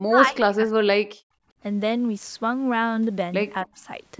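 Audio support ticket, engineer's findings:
Speech suppressed in double talk, 0.07–1.13 s: echo canceller likely misjudged near-end speech as loudspeaker echo while both sides talked and attenuated the mic path. Speech level collapses by roughly 40 dB at worst, about 1 s affected.

Speech suppressed in double talk, 3.64–3.83 s: same mechanism, shorter. Canceller likely clamps the mic during overlap. Speech drops roughly 35 dB for about 0.2 s. Audio band-limited to 8 kHz throughout by the call mic chain.

Background gated by the echo canceller, 1.41–1.58 s: canceller clamped the mic hard during loudspeaker playback, then released. Room tone dips about 23 dB for roughly 150 ms.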